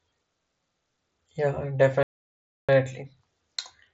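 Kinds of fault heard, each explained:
Playback stall: the speech drops to silence from 2.03 to 2.69 s, then resumes, likely because the player starved of data or its thread was blocked.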